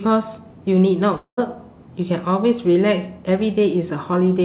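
From 1.16 to 1.39 s the speech dissolves into a fading buzz, then silence, likely a long network dropout; the spectrogram shows smeared bands decaying into a blank gap.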